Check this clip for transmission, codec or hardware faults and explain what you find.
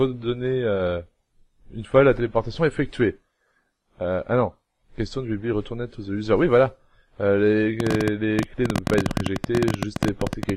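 One hardware-type fault is present. A train of clicks runs from 7.80 s to 10.50 s: about forty sharp, similar pulses arriving roughly 15 times per second at an uneven pace. The cause is likely electrical interference from nearby equipment or a faulty connection or power supply, injecting brief spikes into the signal path. They sound like a rapid, stuttering ticking, peaking around 15 dB above the program level and cutting through quiet passages too.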